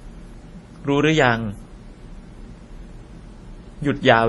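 The speech was likely transcoded between lossy codecs, a low-rate MP3 pass followed by WMA re-encoding. Throughout the clip nothing sounds above 11.5 kHz, and the smeary, swirling first-generation artefacts are layered with a second codec's graininess, which fits roughly 32 kbit/s then 64 kbit/s.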